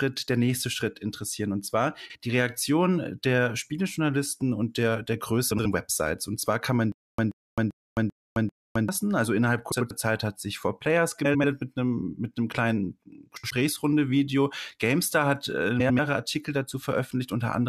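Speech, with two kinds of fault. Frames out of order occurs six times: 2.05–2.16 s, 5.51–5.66 s, 9.71–9.91 s, 11.24–11.44 s (just after "mit einem mit einem"), 13.36–13.51 s (just before "einem mit einem kleinen") and 15.80–16.00 s (just before "hat äh"). In each case two adjacent blocks of about 46, 70 or 93 ms play swapped, which fits runs of two to four frames decoded in the wrong order. The result is a brief garbled flutter, and no time is lost. From 6.92 to 8.89 s there is a stutter with silent gaps: a 130 ms burst repeats five times, each followed by about 263 ms of digital silence, giving a steady 393 ms cycle. The likely cause is a stalled stream or player re-playing its last fragment on each retry and then running dry, so the audio that should have filled that span is lost.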